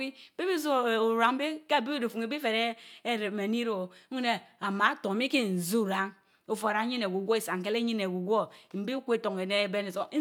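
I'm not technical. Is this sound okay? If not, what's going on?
Yes, no technical faults are audible in this speech recording.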